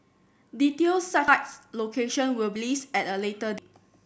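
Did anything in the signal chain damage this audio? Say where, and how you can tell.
Yes. The speech jumps ahead at 1.28, 2.56 and 3.58 s, with no silent gap, losing roughly half a second at the first point and about 0.3 s at each of the others. This is likely a dropped buffer (overrun) at the driver stage, where the hardware overwrote samples before they were read.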